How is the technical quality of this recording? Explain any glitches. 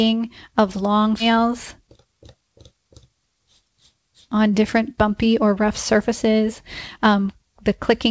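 The recording has two glitches close together near the start, both from the receiving end of a call that was band-limited at 8 kHz, so nothing above that survives.

At 1.2 s there's a skip ahead. Roughly 0.4 s of speech never reached playback, either lost in transit or thrown out when the jitter buffer overflowed with newer audio already queued behind it. Nothing fills the hole, so the sound on either side of the cut is butted together and the speech lurches forward with about 0.4 s missing.

Right after that, from 1.30 to 2.42 s, you get a jitter buffer speed-up. The buffer was holding more audio than it wants, so the receiver trimmed off tiny slices, each a pitch period or a few long, over and over until it had shed about a tenth of a second. That makes the speech run around 109% speed without changing pitch, so that stretch sounds a bit rushed before it settles back to normal pace.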